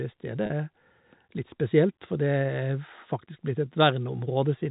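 At 0.46 to 0.50 s, packet loss with pitch repetition: about 40 ms of speech went missing, which fits two 20 ms packets, and the receiver repeated the last pitch period, leaving a brief, slightly held, buzzy sound.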